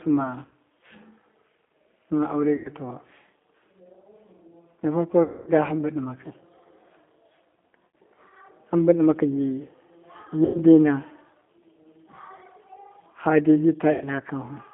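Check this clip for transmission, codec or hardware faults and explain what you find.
Two faults are audible: G.729 coding throughout the clip, and six short dropouts patched over by packet loss concealment.

G.729 codec, throughout. The sound is squeezed into a band of roughly 200 Hz to 3.6 kHz and rebuilt from a vocal tract filter, a pitch predictor and a few pulses per frame, which points to an 8 kbit/s G.729A link. The coding damage is plainly audible. The speech is intelligible but rough and slightly synthetic, dull with no content above the band edge, and has a warble on breaths and background.

VoIP packet loss concealed by the speech codec, at 0.45–0.51 s, 2.56–2.70 s, 5.23–5.51 s, 7.91 s, 10.45–10.62 s and 13.92–14.08 s. Each time, lost audio of 60, 90, 240, 60, 90 and 90 ms respectively, which fits runs of 30 ms packets going missing, is replaced by the decoder extending its last pitch and filter at falling gain. 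The result is a buzzy, stretched tone that fades. The 5.23 s gap is the longest. Because each frame builds on the one before, the speech stays thin for a moment after it resumes.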